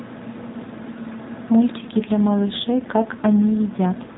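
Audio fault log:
1.78–4.18 s, AMR rate drop: from here to the end the speech turns rougher and buzzier, with no gap and no change in band. That points to the codec stepping down from 12.2 to 5.9 kbps, leaving fewer pulses to drive the vocal-tract model.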